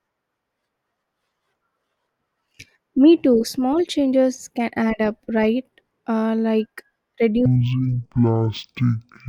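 From 7.46 s to the end of the clip at about 9.28 s, the speech drops into a stereo read as mono fault. Left and right samples that should be split into two channels are instead consumed in sequence as one stream, so every sample pair is treated as two successive moments. The result plays at 0.5x speed and 12 semitones down, a full octave, giving a slowed, deep, drawn-out sound.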